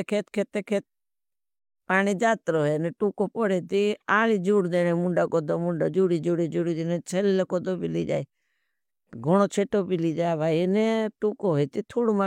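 Listening closely across the whole recording, nothing in the speech stood out as a technical problem at any point.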